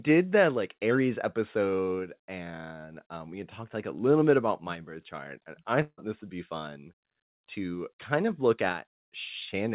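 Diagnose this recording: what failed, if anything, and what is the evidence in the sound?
A long network dropout likely hit the receive side at 5.82 s, after "birth chart and I". The gap is concealed with a fading buzz for about 155 ms, then near-silence before "this would be fun" resumes at 6.0 s. The lost audio is never recovered. The call path's G.711 mu-law coding leaves nothing above 4 kHz.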